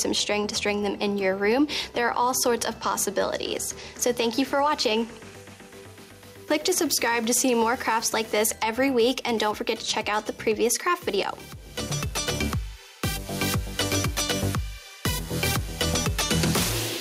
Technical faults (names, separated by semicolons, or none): gain pumping